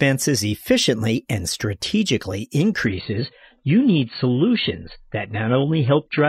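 Speech, and at about 2.86 s it drops abruptly to a lower-bitrate version of the adaptive stream, staying there to the end. Nothing sits above 4.5 kHz afterwards and codec artefacts climb with no gap, which fits a switch from around 96 kbit/s AAC to roughly 16 kbit/s after the connection slowed.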